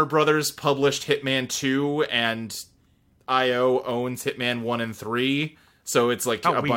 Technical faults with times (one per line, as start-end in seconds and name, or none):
none